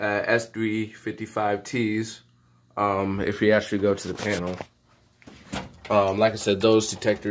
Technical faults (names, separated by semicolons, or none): none